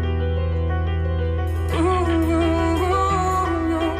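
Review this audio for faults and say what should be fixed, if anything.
No technical faults can be heard anywhere in the audio. Nothing needs to be fixed.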